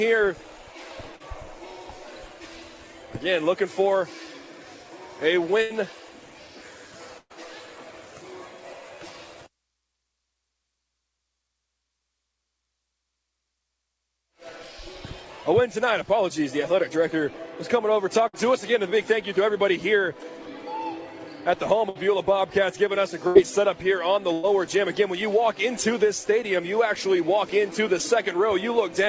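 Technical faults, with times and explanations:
1.16 to 1.22 s, short concealed packet loss: about 40 ms of the stream did not reach the decoder in time. The receiver bridged the hole by extending the last sound it had, carrying on its pitch or its noise texture, then crossfaded back into the real signal. It is heard as a brief smear or wobble.
5.62, 7.18, 18.28, 21.89, 23.27 and 24.33 s, burst of packet loss: six runs of lost or late packets, each removing between 60 and 120 ms of audio. The receiver again continued the last sound but turned it down as the gap went on, so each one is a held buzz or fading hiss, and the longest, at 7.18 s, dies away into about 30 ms of silence. The sound then resumes further on with the material in between missing. All of this rides on a call path with nothing above 8 kHz.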